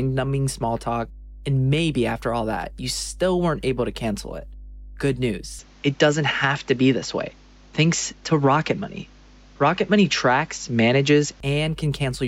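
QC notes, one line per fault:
throughout: mains hum. There's a steady 50 Hz tone sitting under everything, and it's loud, only around 15 dB below the sound itself, so you'll hear it clearly in every gap. That's the power line leaking into the signal path, most often through a ground loop or a transformer sitting close to the cabling. Since it's a fixed low tone with a bit of harmonic buzz, a notch filter could take much of it out.
5.59 to 11.40 s: input switched to a poorer device, likely. At 5.59 s the tone changes abruptly, with no gap at the join. Everything above 7.6 kHz disappears, so it turns duller and boxier, the level moves by roughly 5 dB, and a new noise floor appears about 35 dB down. That combination sounds like the recording dropped to a narrower-band input, such as another mic or a headset call profile, and then switched back at 11.40 s, where the top end returns.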